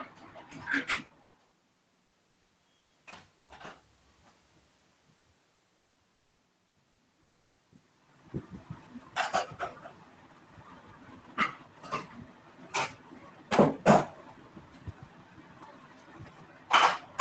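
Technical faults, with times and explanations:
0.91–3.50 s, repeated packet loss (robotic sound): ten gaps, longest 120 ms, each patched by extending the last sound, so about 28% of the stretch turns choppy and robotic.
5.18, 5.54, 6.68 and 6.92 s, burst of packet loss: each 60 ms of audio is missing and replaced by the previous sound held and fading, heard as a short buzz or hiss.
5.78–5.99 s, long network dropout: 180 ms is replaced by a held, fading continuation of the prior sound, likely from a lengthy network stall, and the audio resumes with that part gone.
6.14–6.41 s, long network dropout: 240 ms is concealed by a decaying buzz or hiss that ends in about 50 ms of silence, likely from a stalled connection, before the audio returns further on.
7.22–7.61 s, long network dropout: 360 ms is filled with the last sound stretched and fading, likely caused by a network interruption, and the audio picks up later without the missing section.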